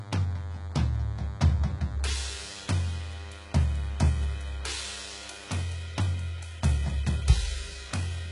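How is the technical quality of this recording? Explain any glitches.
The technical quality is poor, with two faults in this music recording.

Throughout, the treble is heavily damaged and nothing appears above 11.1 kHz, a hard ceiling on a spectrogram. This is likely HE-AAC compression at a very low bitrate, around 12 kbps, whose replicated upper bands sound gritty and metallic.

From 0.0 to 5.6 s, a DECT cordless phone buzz runs roughly 20 dB below the music. Radio bursts every 10 ms are rectified into a thin 100 Hz buzz, visible as evenly spaced harmonic lines on a spectrogram and as a regular ripple in the waveform.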